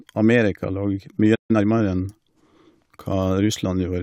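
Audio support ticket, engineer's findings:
Playback stall, 1.35–1.51 s: speech cuts out mid-flow, about 140 ms of silence. Likely buffer underrun or blocked audio thread in the player. Waveform: flat silent gap. Spectrogram: blank vertical band across all frequencies.

Time-compressed catch-up, 1.51–1.65 s: speech hurried at 2x, pitch unchanged. Player cutting and cross-fading small segments to clear its backlog. Spectrogram: harmonics at normal height, syllables packed closer. Waveform: dense, shortened envelopes.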